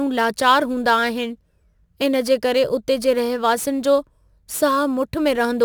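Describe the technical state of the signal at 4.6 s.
At 4.6 s the speech carries crude rate conversion, present throughout the clip. Samples were repeated with no filtering, in a pattern that fits stepping 44.1 kHz up to 48 kHz. The resulting error, roughly 25 dB down, adds a gritty, inharmonic fizz that tracks louder and brighter sounds.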